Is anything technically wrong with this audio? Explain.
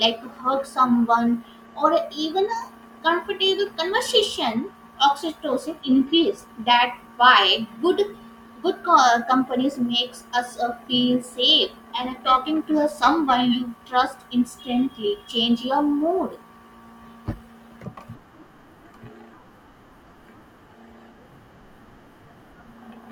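Yes. From 12.12 to 13.94 s the speech takes on a rough, metallic edge. This is periodic clock jitter: interference wobbles the converter clock at around 1 kHz, adding sidebands beside every component.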